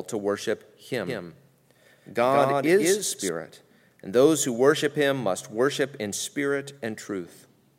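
A second, slower capture path, or an edit holding two out-of-step copies, is the likely cause of the doubled audio track from 1.07 to 3.29 s, just after "to worship". A dry, full-band copy trails around 150 ms behind, about 5 dB quieter, cutting in and out abruptly and blurring the speech.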